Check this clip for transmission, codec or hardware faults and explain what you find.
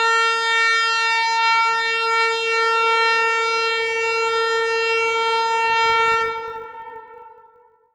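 One fault appears near the end. From 5.68 s to the end, a filter restarted on every block resets its state, so each block opens with a small transient, producing a 50 Hz buzz that tracks the sound's level, unlike steady mains hum.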